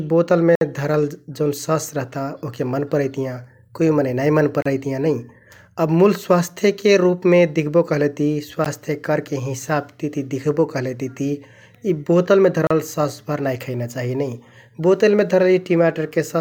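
Brief, hard-edged silences break the speech at 0.55–0.61 s, 4.62–4.66 s, 8.65 s and 12.67–12.71 s, recurring every 4 s. Each is a gap between stream segments: timestamps at 4-second segment joins leave small spaces that the player pads with silence.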